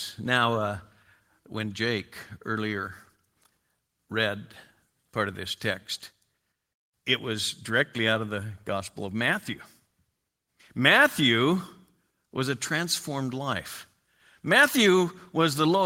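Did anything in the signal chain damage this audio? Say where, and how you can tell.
No, nothing I can hear in this speech points to damage at any stage of the signal chain.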